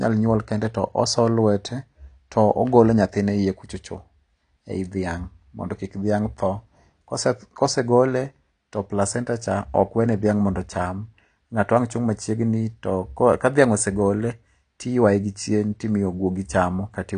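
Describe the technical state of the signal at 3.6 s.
At 3.6 s the speech carries AAC compression artefacts, and they run through the whole clip rather than starting or stopping there. Nothing is present above about 9.8 kHz, and the missing top end, together with the plainly audible smearing, fits a low bitrate near 32 kbps, likely from AAC-LC encoding. The coder spends too few bits on each frame's spectrum, so it drops the highest band and quantises the rest coarsely. The speech sounds dull and swirly, with a fizzy, unstable edge on sibilants.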